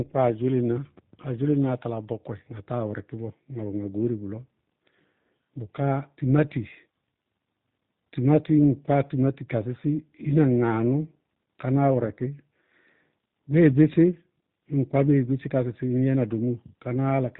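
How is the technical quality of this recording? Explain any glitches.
The speech has clearly audible codec damage from start to finish. G.729 codec, throughout: the voice is rebuilt from a vocal tract model and sparse pulses, consistent with 8 kbit/s coding, so nothing above 4 kHz survives and it sounds muffled, rough and synthetic.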